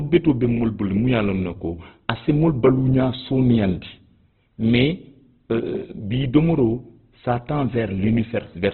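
Throughout, the speech is rough, grainy and dull, with nothing above 4.1 kHz. This is likely heavy Opus compression, fitting a bitrate near 12 kbps.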